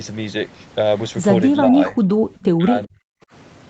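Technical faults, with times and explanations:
1.6–2.06 s and 2.57–3.19 s: speech suppressed in double talk. The level dips by about 10 dB, then drops by about 40 dB, almost to silence. This is likely an echo canceller muting the talker during overlap, and it shows as hollowed waveform stretches and faded spectrogram energy.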